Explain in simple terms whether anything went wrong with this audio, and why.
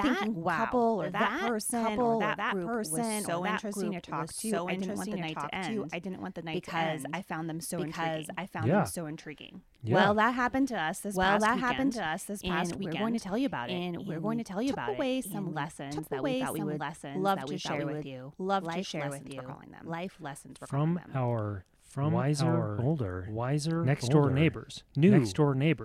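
Throughout the speech, everything is heard twice, a second copy about as loud arriving roughly one and a half seconds late: a doubled audio track, likely from a duplicate recording path.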